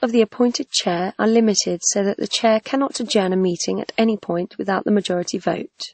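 A speech clip that was likely encoded twice, first at a low-bitrate MP3 setting around 32 kbit/s and then re-encoded as WMA at around 64 kbit/s. This transcoding between lossy codecs leaves nothing above 8.4 kHz throughout, with both codecs' artefacts heard layered together.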